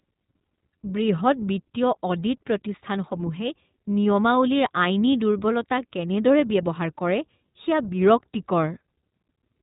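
Throughout, the speech sounds boxy and slightly rough, with a synthetic edge: the iLBC codec cuts everything above 4 kHz and codes each 20 ms frame independently.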